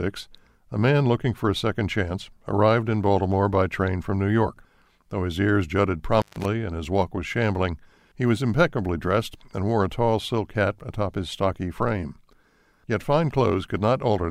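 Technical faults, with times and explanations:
6.15 to 6.45 s, intermittent contact: a loose plug or cable connection briefly breaks, right after "his ears jutted", and the signal path opens for about 143 ms within this span. The sound drops out abruptly, with crackle at the edges as the contact scrapes apart and back together, leaving faint hiss in the gap until the line closes again and the audio resumes at "and his".
7.02 s, dropped samples: a single sharp click sits between "and his" and "was shambling he was", most likely because a tiny run of samples went missing from the stream, a fraction of a millisecond's worth. With those samples gone, the waveform leaps straight from one value to a later one. That discontinuity is heard as a brief tick and shows as a thin vertical line across the spectrum. The gap is far too short to remove any audible sound.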